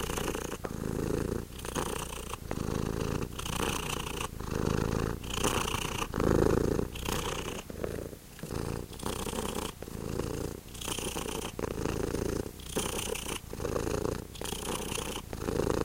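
No technical faults can be heard at any point in the audio.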